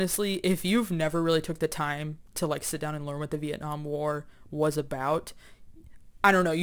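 From start to finish the speech carries crude rate conversion: the audio was taken from 48 kHz to 44.1 kHz by simply picking the nearest sample, with no filtering. The repeating pattern of skipped samples adds inharmonic error roughly 25 dB below the speech, heard as a gritty fizz riding on louder and brighter syllables. A spectrogram would show faint spurious tones that don't follow the voice's harmonics, and the waveform would have tiny steps.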